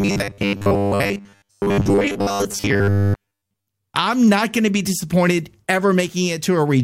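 From 0.01 to 3.67 s the speech has that robotic sound from repeated short buffers, a rigid 100 Hz metallic buzz, likely from replaying about 10 ms chunks for most of it.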